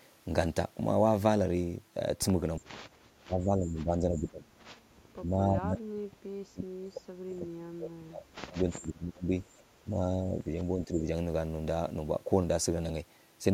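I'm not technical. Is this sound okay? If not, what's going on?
No. The speech fades or cuts out at 2.59 to 2.71, 3.23 to 4.49, 5.15 to 7.1, 7.36 to 9.44, 9.84 to 10.54 and 10.75 to 11.07 seconds. It is worst from about 5 to 9 seconds and only slight near the end. This is speech suppressed in double talk. The likely cause is the call's echo control turning this side down while the other person was also talking.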